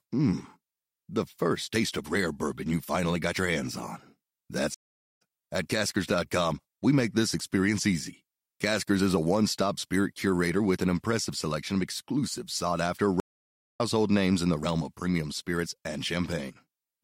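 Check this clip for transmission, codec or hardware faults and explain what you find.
Two stream reconnects break this speech clip, at 4.74 to 5.22 s and 13.2 to 13.81 s. Each time the connection dropped and the player restarted its decoder mid-stream, leaving a gap of 438 ms, then 577 ms. The speech then resumes about 0.4 s and roughly half a second further on, so material is skipped, and it comes back with a brief muted or faded onset.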